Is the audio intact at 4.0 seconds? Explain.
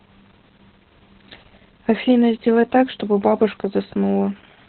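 No. At 4.0 seconds, as across the whole clip, the speech carries heavy Opus voice compression. The sound points to the SILK linear-prediction coder in narrowband mode at a very low rate, around 8 kbps, with nothing above about 4.2 kHz and a coarsely coded excitation. The result is muffled, hoarse and slightly robotic. A plain low-pass filter would only dull the speech; the rough, buzzy texture of the excitation is what marks this as codec damage.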